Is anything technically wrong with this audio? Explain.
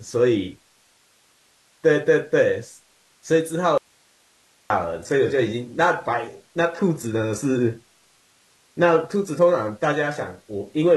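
Yes, there are two faults in this speech clip.

From 3.78 to 4.70 s there is an audio dropout to a faint residue. The speech cuts out abruptly for about 0.92 s, leaving only hiss about 40 dB below the signal. This is likely a break in the source while the downstream path stayed live.

From 5.00 s to the end, the adaptive stream plays at a lower bitrate. The quality changes suddenly with no gap: the treble collapses into a synthetic, swirly replica and codec artefacts rise, which fits a switch from a 96 kbit/s AAC stream to a 16 kbit/s HE-AAC one.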